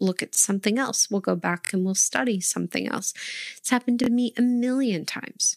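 At 0.35 to 0.37 s, just before "something else", a repeated buffer occurs: new audio failed to arrive in time, so the device played its last block again. The same 23 ms slice sounds once more, with a hard join, heard as a brief stutter. It recurs twice over at 1.65 to 1.70 s, between "go back" and "and we'll study something", and at 4.04 to 4.09 s, between "happened to" and "me a". The slice length fits a 1024-sample buffer. Unlike a dropout, nothing goes silent; a fragment repeats instead.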